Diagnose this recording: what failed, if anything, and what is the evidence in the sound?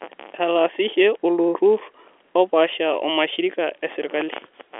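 Nothing has failed here: the speech sits in an ordinary G.711 telephone channel, with the band running from about 300 Hz to 3.4 kHz and nothing above roughly 3.7 kHz, which is just how a working phone line sounds.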